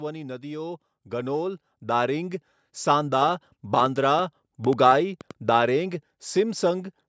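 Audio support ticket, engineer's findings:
Automatic gain rising, 1.03 to 2.43 s: level climbs about 6 dB over 1.4 s, background noise lifting with it. AGC raising gain on quiet input. A talker getting louder would leave the noise floor unchanged.

Train of clicks, 3.29 to 5.32 s: around ten similar pulses, about 4.5 per second, irregularly spaced, peaking about 5 dB above the speech, audible in pauses too. Likely interference or a faulty connection. Mouth clicks would vary in shape.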